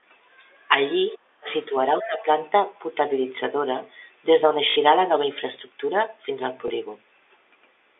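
From 1.12 to 1.49 s the talker's level sinks by roughly 35 dB, likely speech suppressed in double talk as the echo canceller ducks both voices, unlike a clean dropout with no residue. At 1.48 to 1.64 s, the other side's voice leaking through appears faintly, around 25 dB down, likely uncancelled loudspeaker echo rather than background chatter. Smaller dips follow at 1.70 to 1.75 s (a few dB) and 2.00 to 2.27 s (about 15 dB), with a brief leak at 2.03 s. At 4.70 to 4.76 s, 60 ms of packet loss with last packet repeated gives a buzzy robotic stutter, consistent with three 20 ms packets, distinct from silence-filled gaps. A single 20 ms repeat gives a small blip at 6.68 s.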